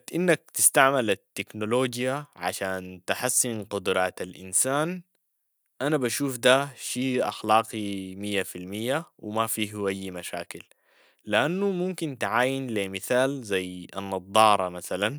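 No technical faults detected.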